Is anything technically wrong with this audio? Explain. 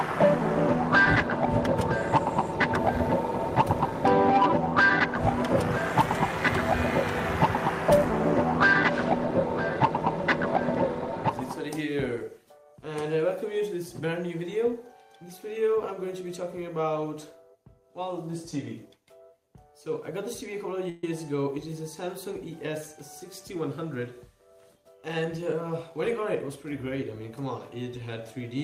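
Yes, there are two faults.

From 20.89 to 21.04 s there is a call audio freeze: about 135 ms where the last sound is stretched into a fading buzz or hiss, likely because delayed packets emptied the jitter buffer. Nothing is lost; the audio resumes late. On a spectrogram this shows as smeared, flat horizontal bands.

From 25.07 to 26.09 s a jitter buffer speed-up runs the audio at about 106% speed, with roughly 70 ms trimmed away in pitch-period slices to shed excess delay. It sounds hurried at unchanged pitch. The waveform shows normal-length cycles with whole periods dropped and no visible gaps.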